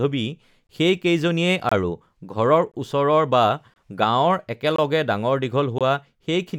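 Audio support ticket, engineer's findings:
Speech cuts to dead silence for about 23 ms, once per second: 0.67–0.69, 1.69–1.72, 2.72–2.74, 3.74–3.76, 4.76–4.78, 5.78–5.81 s. Gap between chunks. Probable component is the chunked delivery or playback path, with 1.0 s segments joined with padding or a late start on each one. The holes are inserted silence at every join, so the speech stutters on a steady 1 s grid without any of its content dropping out.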